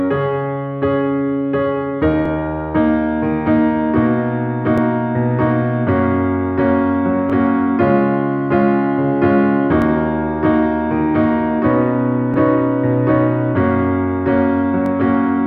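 Overlapping chunks occur at 2.26, 4.78, 7.30, 9.82, 12.34 and 14.86 s, a steady rhythm that follows the 2.5 s chunk length. At each boundary, the next chunk starts about 21 ms before the previous one finished, so that 21 ms slice of audio plays twice. Each join produces a brief click or stutter, and because the spacing never changes, the defect has a regular ticking quality across the whole clip.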